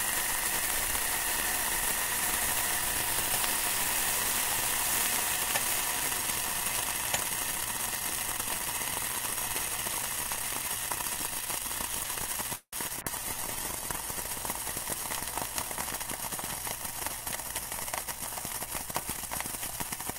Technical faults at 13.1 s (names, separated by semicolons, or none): call bitrate drop